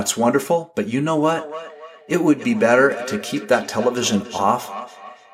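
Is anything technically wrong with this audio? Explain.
Yes, from 1.34 s to the end there's feedback echo between two devices: a second device replays this mic's signal, which gets re-captured, so the speech returns every third of a second or so, at about 14 dB down.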